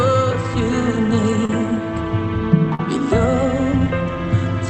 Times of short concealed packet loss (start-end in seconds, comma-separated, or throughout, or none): 1.45-1.50, 2.75-2.80